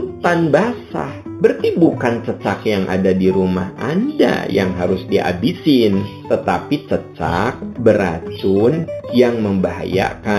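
Throughout the clip the top end sounds dulled, and a faint metallic shimmer sits above the sibilant and high-pitched sound. This is imaging from linear upsampling. The material appears to have been raised from a low rate, which fits an 8 kHz source brought up to 44.1 kHz, by joining samples with straight lines. That weak filter softens the band edge and leaves mirror copies of the spectrum between 4 kHz and 8 kHz, roughly 30 dB below the signal.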